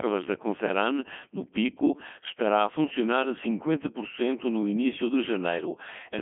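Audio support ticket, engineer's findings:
Robotic, buzzy speech throughout, harmonics sounding synthetic. Band-limited to roughly 200 Hz to 3.4 kHz, nothing above 3.8 kHz. Component: Codec 2 vocoder, heavy damage, consistent with the 3.2 kbit/s mode. Mechanism: only pitch, voicing, energy and spectral envelope transmitted. Decoder rebuilds the voice from sine waves, so the original waveform is lost.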